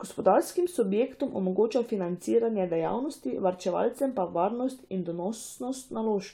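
No technical faults can be heard anywhere in the recording, and the signal stays steady and intact throughout.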